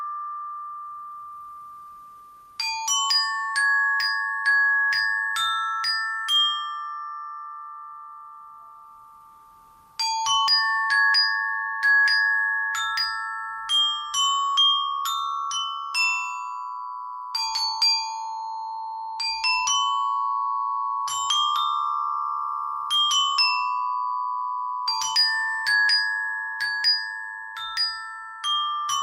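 Two short bursts of DAB burbling, from 22.27 to 22.32 s and 24.12 to 24.24 s, break into the audio. They fit two and four corrupted 24 ms MP2 frames. Unlike a dropout, the sound never goes silent. Instead, short blips of noise appear in single sub-bands as a small residue of bit errors slips past the error correction.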